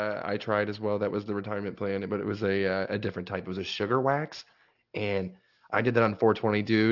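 Aliasing runs throughout the speech, from start to finish. The rate was reduced without an anti-alias filter, so content above 6 kHz folds back below it, which fits a drop to a 12 kHz rate. Sibilants turn gritty and metallic, with folded energy roughly 25 dB under the voice.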